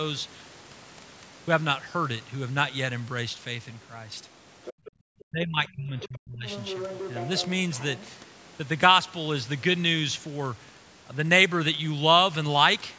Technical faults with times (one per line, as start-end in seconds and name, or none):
4.63-4.91 other side's voice leaking through
4.73-4.93 background gated by the echo canceller
5.21-6.46 speech suppressed in double talk
6.01-6.08 other side's voice leaking through
6.46-8.10 other side's voice leaking through